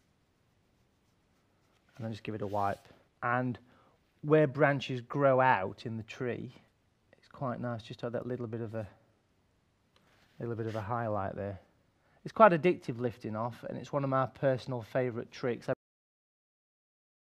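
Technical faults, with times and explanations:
15.73 to 17.31 s, cut-off end: the sound halts mid-event at 15.73 s and drops straight to digital silence for the final 1.6 s, with no decay or tail, because the closing buffers were never written out or played back.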